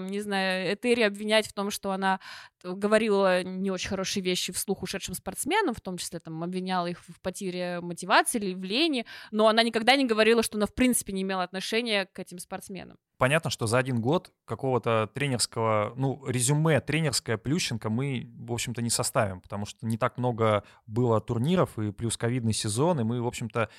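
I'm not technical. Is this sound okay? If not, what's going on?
Yes, no faults heard.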